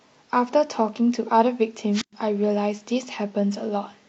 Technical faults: wireless microphone squelch dropout

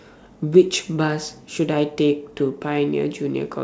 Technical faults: none

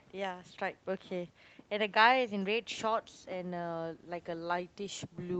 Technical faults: none

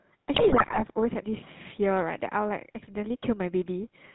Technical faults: GSM full-rate codec; GSM bit errors

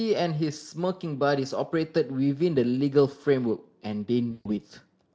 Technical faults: VoIP packet loss concealed by the speech codec

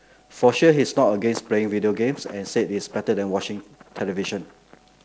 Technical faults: none

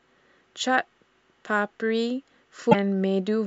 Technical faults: broken MP3 bit reservoir

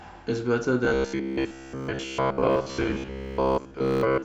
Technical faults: robotic sound from repeated short buffers

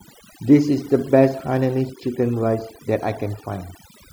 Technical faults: overdone noise removal

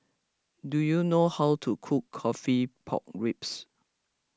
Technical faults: none

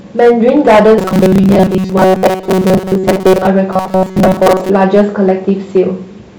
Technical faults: hard clipping; robotic sound from repeated short buffers

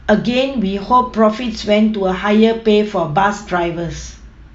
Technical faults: none

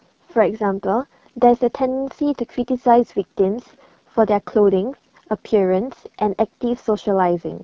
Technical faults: AMR wideband (HD Voice) codec

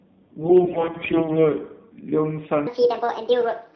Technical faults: AMR narrowband mobile codec; AMR bit errors; section at the wrong speed

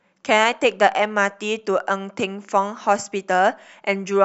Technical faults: none

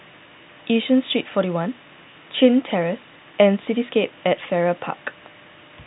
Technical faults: none

